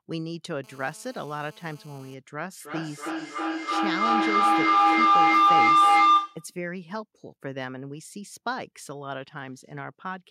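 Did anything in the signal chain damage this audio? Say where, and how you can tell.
Yes. From 0.64 to 2.14 s there is a GSM phone buzz entering at the analogue stage: a hard, raspy tone at 217 Hz, steady throughout, about 20 dB below the speech. A nearby 2G phone in a call transmits 217 bursts a second, and the audio wiring or preamp rectifies those radio pulses into audible clicks. On a spectrogram this appears as evenly spaced horizontal lines at 217 Hz and its many harmonics, independent of the speech.

From 2.6 to 6.55 s a feedback howl builds. This is an acoustic loop between two devices in the same room on the same call. Each pass from loudspeaker back into microphone adds gain, so instead of fading, the repeats grow and narrow toward the frequency the loop favours, around 1 kHz. At its loudest the howl sits about 14 dB above the speech, with each trip around the loop taking roughly a third of a second. 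A spectrogram shows a single narrow band near 1 kHz that strengthens over time, and the waveform envelope swells until the howl stops at 6.55 s.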